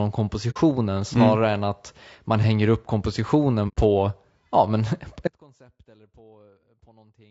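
Speech, likely coded with AAC-ELD, the low-delay AAC used for video calls, at around 32 kbps. Its short frames resolve pitch harmonics poorly, so the voice sounds plainly rough and grainy throughout. AAC frame loss with muting occurs twice. The decoder zeroed the missing frames, leaving soft-edged holes from 0.50 to 0.57 s, just before "mm snarare", and from 3.68 to 3.77 s. These fit about 60 ms and 90 ms of lost audio, or two and three frames. From 5.28 s to the end, an audio dropout to a faint residue abruptly cuts the speech. Only a faint trace remains, roughly 35 dB below the normal level, likely as the signal path stays live after the break.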